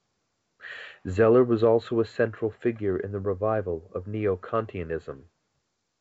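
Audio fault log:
No faults are heard in this speech. It is carried by G.722 wideband telephone coding at 64 kbit/s, with nothing above 7.7 kHz and at most a faint trace of coding damage.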